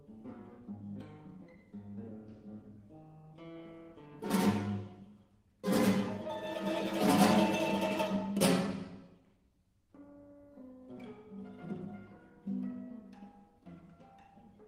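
No technical faults can be heard anywhere in the audio. Nothing breaks up, drops out or distorts at any point.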